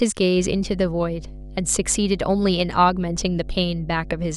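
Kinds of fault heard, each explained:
Mains hum: power-line coupling adds a steady 50 Hz tone from 0.35 s to the end, roughly 15 dB under the speech; unlike rumble, its pitch never wanders.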